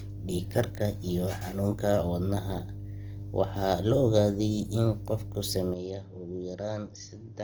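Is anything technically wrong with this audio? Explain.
Yes. Three faults can be heard.

Mains hum runs through the whole clip. It is a steady low tone at 50 Hz. A ground loop or a nearby transformer has let the power line leak into the signal path. The hum is strong, only roughly ten dB below the speech. It sits under every syllable and fills the pauses. It gives the recording a constant dull drone that never changes with the talking.

Compression damage is also present throughout. The grainy texture is likely Opus compression in its music (CELT) mode. The sound points to a low bitrate, around 24 kbps. The band stays wide, reaching about 20.2 kHz, so the speech is not muffled. But the encoder runs short of bits and fills bands with folded or noise-like content. Voiced sounds turn rough, hissy and grainy. The damage is plainly audible.

At 5.74 s the input switched to a poorer device, which continues to the end. 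The switch is likely a change of microphone or a headset call profile. There is no gap at the change. Everything above 6.4 kHz disappears, so the speech suddenly sounds dull and boxy. The level drops by roughly ten dB. A new, faint background noise appears, far below the speech.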